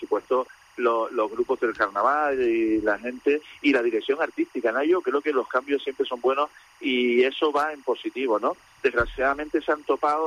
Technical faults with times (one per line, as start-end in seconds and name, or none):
0.00-10.26 timecode bleed